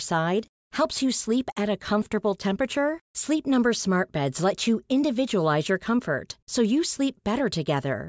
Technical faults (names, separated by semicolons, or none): none